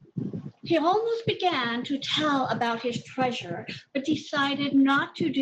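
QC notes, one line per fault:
No faults were heard in this speech clip. There is nothing to log for it.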